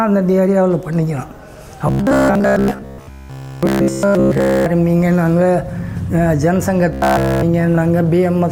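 Audio likely arrived too seldom, so buffers of about 15 ms were replayed, causing robotic sound from repeated short buffers: a rigid 66.8 Hz buzz through most of 1.87 to 4.66 s and all of 6.93 to 7.43 s.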